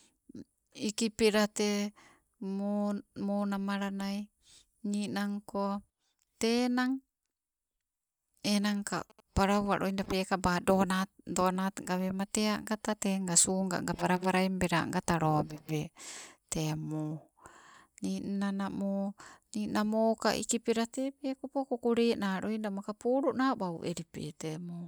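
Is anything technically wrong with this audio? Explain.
Yes. From 8.48 to 10.06 s there is GSM signalling burst interference. A nearby 2G phone is exchanging short signalling bursts with its network. The audio circuit rectifies them into a galloping ticking pattern with brief 217 Hz buzzes. It sits well beneath the speech.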